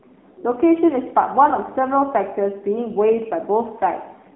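AMR narrowband mobile codec damage runs through the whole of this speech clip, with the audible band confined to roughly 200 Hz to 3.6 kHz. The pulse-driven vocal-tract model leaves the voice plainly buzzy and synthetic, which fits a low mode around 7.4 kbps.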